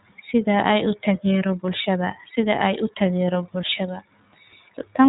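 Throughout, the speech carries iLBC codec damage: nothing above 4 kHz, with a plainly rough, synthetic edge from independently coded frames, consistent with the 30 ms, 13.33 kbps mode.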